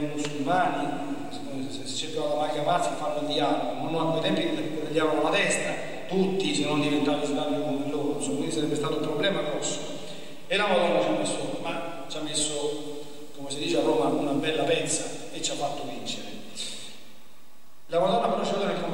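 The audio carries a DC offset from start to finish: the entire waveform sits displaced from zero by a fixed amount, about -36 dBFS. It is inaudible as such, but it eats into available headroom and appears as constant energy at 0 Hz.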